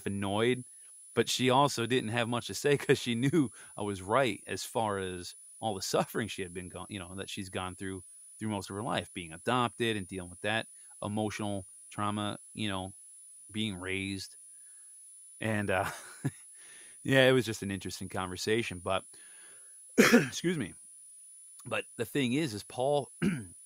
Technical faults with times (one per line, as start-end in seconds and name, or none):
0.00-23.65 switching supply whistle